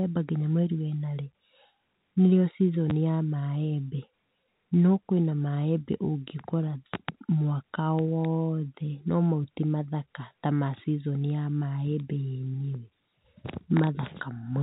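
At 2.9 s there is packet loss with the last packet repeated: a 10 ms gap, which points to a single lost packet, was filled by replaying the preceding audio, leaving a small blip. On the waveform a repeated 10 ms segment ends in a discontinuity; the spectrogram shows a thin vertical broadband line there, capped at 4 kHz by the G.711 telephone band.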